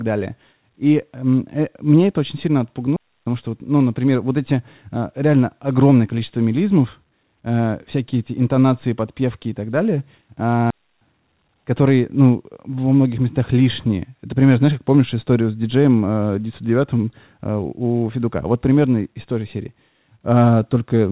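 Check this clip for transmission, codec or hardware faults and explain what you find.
Two digital wireless dropouts occur. The speech is also band-limited, with nothing above 4 kHz, as expected from a G.711 A-law call path.

At 2.96 s, after "мне это очень сильно", and again at 10.70 s, the digital wireless dropout leaves a clean hole of near silence lasting about 0.30 s and 0.31 s. The link lost too much data, so the receiver muted. Unlike an analogue dropout, there is no hiss or noise burst on either side.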